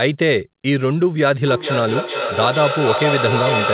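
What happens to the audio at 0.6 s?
Nothing goes wrong at 0.6 s: the speech passes through intact, with only the narrow telephone-band sound of the call path, which carries nothing above 4 kHz.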